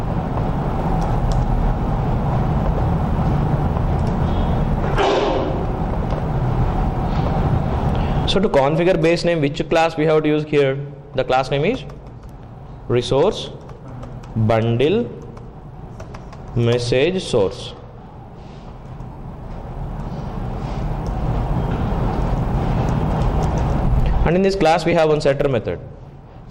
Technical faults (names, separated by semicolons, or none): lost LE Audio frames